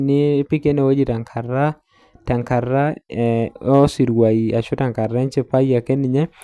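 No technical faults are audible.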